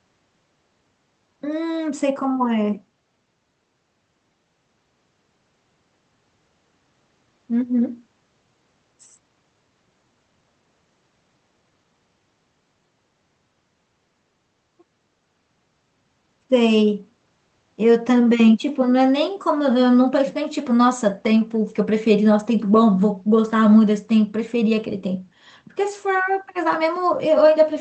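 No technical faults are audible.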